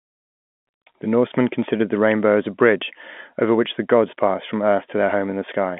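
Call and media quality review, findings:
No faults found on review.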